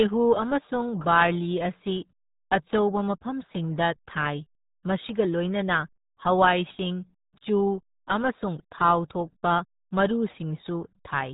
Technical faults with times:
0.00-11.34 RealAudio 14.4 codec

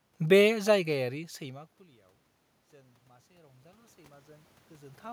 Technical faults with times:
2.71-5.08 automatic gain rising

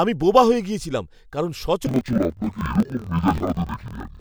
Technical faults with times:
1.87-4.21 interleaved audio read as planar

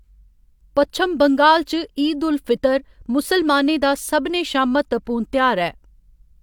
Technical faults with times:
none

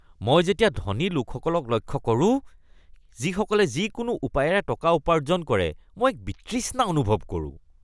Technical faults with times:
none

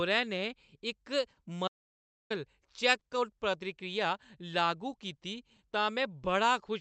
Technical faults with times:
0.00-6.80 clock drift between sender and receiver
1.35-1.39 short stall from a late packet
1.68-2.30 audio dropout to silence
2.99-3.03 short stall from a late packet
5.56-5.60 short stall from a late packet

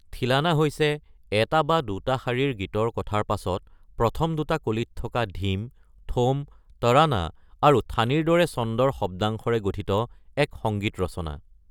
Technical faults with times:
none

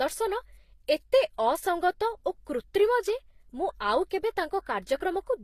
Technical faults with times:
0.00-5.44 transcoding between lossy codecs

